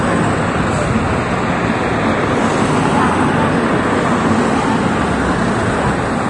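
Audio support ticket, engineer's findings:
Hissy, grainy treble with roughened tones and smeared attacks throughout; nothing above 10.6 kHz. Likely Vorbis compression, coarse residue quantisation at a low rate, consistent with about 31 kbps.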